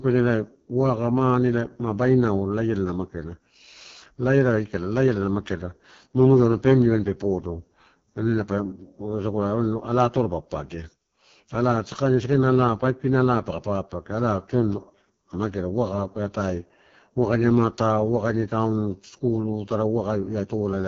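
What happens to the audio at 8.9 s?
At 8.9 s you're hearing the AMR wideband (HD Voice) codec, which runs through the whole clip. The speech sounds heavily rough and raspy, which fits its lowest 6.6 kbit/s mode, where the pulse-driven vocal tract model runs short of bits. Nothing comes through above about 6.9 kHz.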